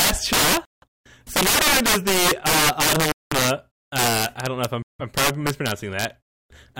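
From the start and throughout the speech, integer overflow: loud peaks driven about 15 dB past full scale wrap to the opposite sign instead of limiting, giving violent cracks sharper than clipping. The waveform shows peaks flipping rail to rail, and the spectrogram shows broadband vertical streaks.

At 0.65–0.84 s, 3.12–3.33 s and 4.82–5.01 s, Bluetooth stalls cut the speech to silence for roughly 170, 195 and 170 ms before it resumes. The likely cause is interference delaying packets until the headphone buffer ran dry. Each appears as a flat gap in the waveform and a blank column on the spectrogram.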